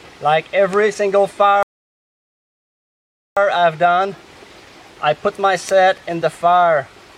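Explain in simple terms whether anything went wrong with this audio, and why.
A rebuffering stall happens at 1.63 seconds: the sound drops to silence until 3.37 seconds, then picks up exactly where it stopped. The player ran out of downloaded audio and waited for more, so nothing is missing, but about 1.7 seconds of extra time is added.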